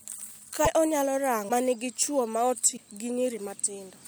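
A speech recording with three short glitches of about 30 ms each, at 0.64–0.67 s, at 1.48–1.51 s just before "ma nigi chuo", and at 2.76–2.79 s right after "ma nigi chuo". At each one the audio skips forward and the first moment after the skip comes out mangled. The likely cause is a broken MP3 bit reservoir: a lost frame, about 26.1 ms, leaves the next frame pointing back at bytes that belong to different audio.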